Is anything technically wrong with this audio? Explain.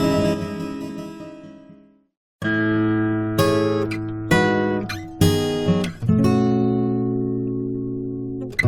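Yes. There is a sudden gain jump at 0.34 s. The level drops by about 6 dB in a single step and stays there to the end. The sound and background noise fall together. This is likely a digital gain change applied without a ramp.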